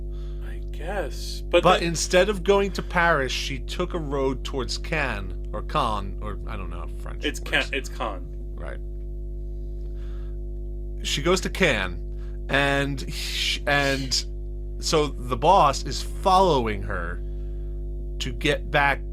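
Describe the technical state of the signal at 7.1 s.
At 7.1 s the speech carries mains hum, as it does through the whole clip. A steady low tone sits under the speech at 50 Hz, with a few low harmonics above it. It is strong, only about 10 dB below the speech itself. The cause is power-line current leaking into the signal path. A ground loop or a nearby transformer does this, and it sets the hum at the 50 Hz mains frequency.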